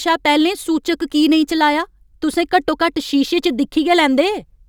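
Sample clock jitter runs through the whole clip. The converter's clock wanders by something like a couple of microseconds, so each sample is captured a little early or late at random, and the size of the error depends on how fast the waveform is changing at that instant. The result is a fine hiss or grain riding on the speech, sitting very roughly 35 dB below it, strongest on loud and bright sounds and gone in the pauses.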